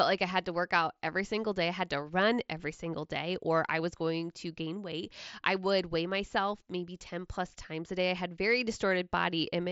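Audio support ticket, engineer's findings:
Concealed Bluetooth headset packet loss at 6.57 s, right after "weight I would weigh". One dropped packet, about 7.5 ms (a single mSBC frame), patched by repeating the best-matching bit of the preceding waveform. Barely audible.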